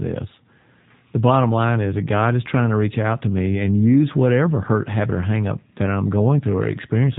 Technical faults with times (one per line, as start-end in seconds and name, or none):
0.00-7.19 G.729 codec